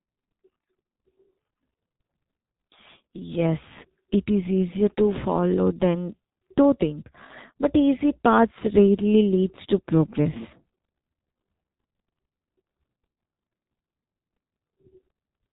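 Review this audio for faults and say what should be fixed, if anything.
The whole recording is degraded by heavy G.723.1 codec damage. Nothing survives above 3.8 kHz, and the speech sounds muffled and hoarse, with smeared consonants, which fits a roughly 6 kbit/s stream. The codec rebuilds speech from a simplified vocal model updated only every 30 ms, so fast transitions blur. A plain low-pass filter would dull the top end but leave the remaining sound clean, not rough. Record or transmit with a wideband, higher-bitrate codec instead.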